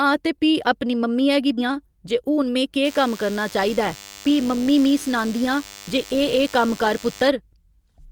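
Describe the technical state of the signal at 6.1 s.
At 6.1 s a nearby DECT handset or base station is firing radio bursts every 10 ms, and the audio circuitry rectifies them. The result is DECT cordless phone buzz, a thin, steady 100 Hz drone rich in harmonics, sitting well below the speech from 2.84 to 7.28 s.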